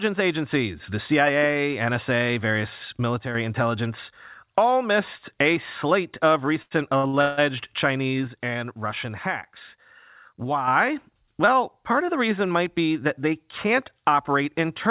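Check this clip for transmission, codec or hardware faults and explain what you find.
Two kinds of fault show up in the speech, heard through a call path whose band stops at 4 kHz, consistent with G.711 mu-law.

One channel drops out from 3.21 to 3.35 s, just before "intelligence all missed a", and again from 8.28 to 10.68 s. The level falls abruptly by about 6 dB, likely because one stereo side was lost before the mono sum. The sound continues uninterrupted, unlike a gap or mute.

Repeated stalls (stutter) run from 6.62 to 7.39 s, after "missed a slate of". The jitter buffer emptied four times, the longest wait 161 ms, and the last sound was stretched to fill it. The speech drags rather than losing pieces, which distinguishes it from dropouts.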